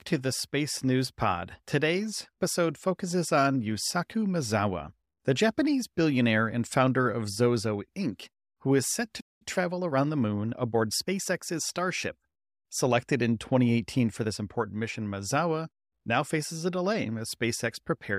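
A speech recording with a playback stall at 9.20 s: the sound cuts off mid-flow for about 0.2 s, most likely because the player ran dry of buffered data or its output thread was blocked. On a waveform this is a flat gap, and on a spectrogram a blank vertical band. A time-compressed catch-up then runs from 9.42 to 11.40 s, with speech hurried to 1.1 times normal speed at unchanged pitch as small slices are cut out and cross-faded. The spectrogram shows tighter syllable spacing with harmonics at their usual heights.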